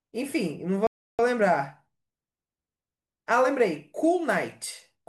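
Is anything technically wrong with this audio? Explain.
Yes. There is a playback stall from 0.87 to 1.19 s, where the speech cuts off mid-flow and the output drops to silence for about 320 ms before resuming. The likely cause is the player running short of data or its playback thread being held up, so nothing reached the output until it caught up. On a waveform this shows as a flat line with abrupt edges, and on a spectrogram as a clean blank vertical band across all frequencies.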